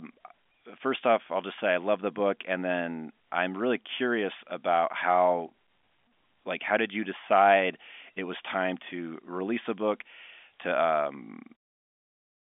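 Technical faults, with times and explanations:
No technical faults can be heard in the speech. It carries the narrow band of a G.711 telephone line, with nothing above about 3.7 kHz, and it fades out smoothly from about 11.5 s to 11.57 s.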